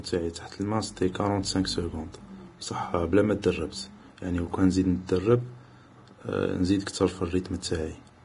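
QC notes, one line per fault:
Throughout, Vorbis compression: the treble stops abruptly at 10.6 kHz, and the remaining upper band in the speech carries a grainy, hissy texture in place of clean detail, with consonant onsets smeared and tonal parts roughened. The damage is heavy, which fits a low bitrate of around 30 kbps. The likely cause is a low-quality Vorbis encode that cut the band limit and quantised the high-frequency residue so coarsely that fine structure was replaced by noise of similar energy.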